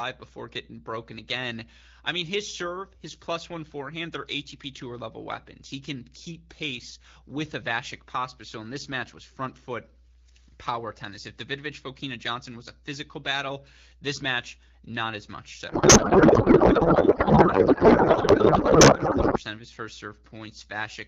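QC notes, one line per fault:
15.69–19.42 s, codec payload misread: the speech gives way to garbled noise and warble that barely tracks it. The AMR-WB decoder is reading fields from the wrong bit positions, which points to octet-aligned AMR being unpacked as bandwidth-efficient.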